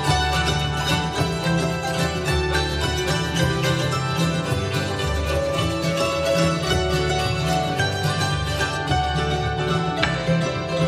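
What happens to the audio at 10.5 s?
At 10.5 s the audio sounds dull and muffled, its treble rolled off smoothly. This is de-emphasis applied wrongly, running from 8.77 s to the end: a treble cut meant to undo pre-emphasis, applied to audio that had none or applied twice, leaving 10 kHz about 8 dB below 1 kHz.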